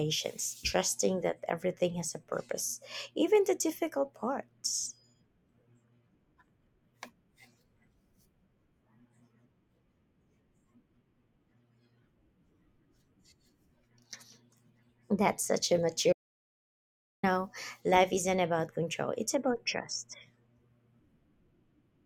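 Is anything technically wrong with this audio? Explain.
Yes, there's an audio dropout to silence from 16.13 to 17.23 s. The speech cuts off mid-flow and about 1.1 s is silent, with no room tone at all, before it snaps back. That's likely the input dropping out while the recorder kept writing silence.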